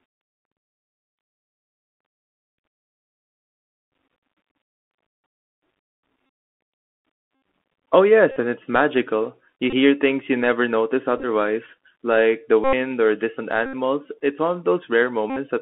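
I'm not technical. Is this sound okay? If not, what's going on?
No. The whole recording sounds muffled and phone-like, with scratchy s sounds and a grainy hiss. That's the Bluetooth CVSD headset codec, an old headset format that keeps only roughly 250 Hz to 3.4 kHz.

There are also short buzzy stutters at 6.26, 7.35, 8.31, 9.70 (just before "hear things you never"), 11.18, 12.64 (between "like the" and "or distant"), 13.66 (just after "or distant") and 15.30 seconds. Each is a Bluetooth headset packet repeated: the wireless link dropped bits of sound, so the headset replayed the last piece over and over.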